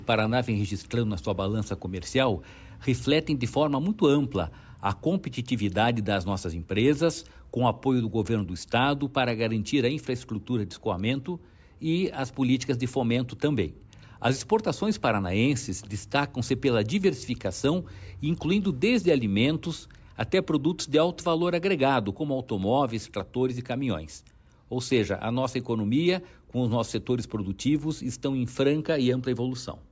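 No technical faults are audible anywhere in the recording, and the signal holds steady throughout.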